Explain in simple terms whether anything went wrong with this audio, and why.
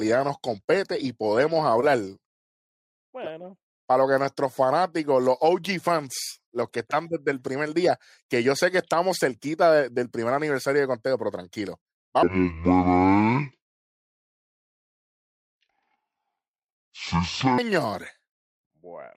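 From 12.23 to 17.58 s, just after "pero tranquilo", the speech suffers a stereo read as mono fault: left and right samples were read in turn as one channel. That makes the speech play at half speed, an octave (12 semitones) lower, with a fainter mirrored high-pitched copy.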